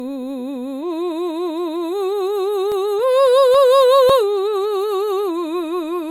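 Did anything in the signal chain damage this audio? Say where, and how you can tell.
Yes. Generation loss runs through the whole piece of music, at the codec stage. The sound is swirly and hollow, with smeared attacks and nothing above 19.9 kHz, more degraded than a single encode would leave it. That fits MP3 at around 93 kbit/s, likely re-encoded about seven times. Each decode and re-encode quantises again on a shifted frame grid, so the noise and spectral holes from every pass pile up.

CD scratch ticks appear from 2.72 to 4.92 s, at the playback stage: nine regular ticks, roughly four a second, the longest only about 4 ms. They are of uneven strength across that span. A scratch or blemish passing under the laser once per disc revolution ruins more data than error correction can rebuild. The player then interpolates or briefly mutes those samples, which leaves a periodic tick.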